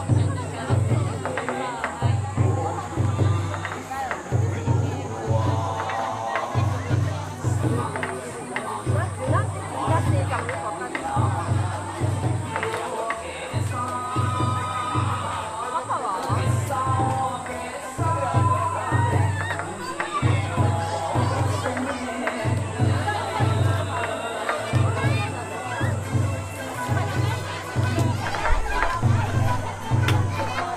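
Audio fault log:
No fault is logged for this audio.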